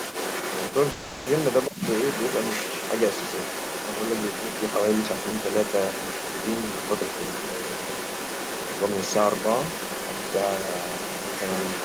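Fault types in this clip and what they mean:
Other side's voice leaking through: A second voice runs under the speech for the whole clip, only a few dB below it. This is likely residual echo the echo canceller failed to remove. Unlike a brief crosstalk burst, it is present throughout.
Call audio freeze: From 0.91 to 1.28 s the last sound is stretched into a fading continuation for about 350 ms, without dropping to silence. This likely comes from packets arriving late. The speech then resumes exactly where it stopped, so nothing is lost, which distinguishes it from a dropout.
Speech suppressed in double talk: Around 1.68 to 1.81 s the main speech briefly sinks by roughly 20 dB for about 150 ms while the other side is talking. This is likely the echo canceller turning down both voices at once. Unlike a freeze, the level dips but the sound is not held or stretched.
Jitter buffer speed-up: From 8.63 to 9.21 s the speech hurries along at 131% speed with its pitch unchanged, as roughly 200 ms of pitch-period slices are trimmed out to reduce the buffer delay. 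The unchanged pitch separates it from simple fast playback.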